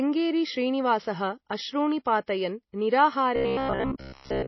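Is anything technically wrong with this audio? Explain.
Yes, three things stand out in this speech clip.

Right through the clip the sound has a watery, swirly quality, with nothing above about 5.8 kHz. That's most likely MP3 compression, and a pretty starved encode, which fits a bitrate around 24 kbps. At that budget the encoder drops weak frequency lines, which then flicker on and off from frame to frame, and it cuts the treble at a fixed point. The damage is plainly audible, and you can hear it on sibilants and on the smeared attacks.

At 2.26 s, just after "श्रीनिवासः अश्रूणि", there's a pre-echo: a short hiss of about 15 ms sitting in front of an attack. The codec spreads its quantisation noise across a whole block, so when a sharp onset lands late in one, the noise sized for the loud part spills into the quiet moment before it. The attack itself comes across softened.

From 3.36 s to the end, around 4.47 s, the sound turns into a rigid, metallic buzz at 66.8 Hz. 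It likely comes from robotic sound from repeated short buffers. Most of that stretch is the same short chunk of audio played over and over while the real material gets skipped. A repeat rate of 66.8 Hz fits a chunk of about 15 ms, and that repetition is what sets the buzz.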